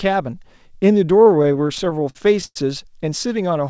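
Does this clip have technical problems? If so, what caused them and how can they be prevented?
Yes. Repeated stalls (stutter) occur from 1.38 to 2.57 s. Late packets emptied the jitter buffer 18 times, so the receiver stretched the last sound, up to 110 ms. A steadier network path or a larger adaptive jitter buffer would prevent this.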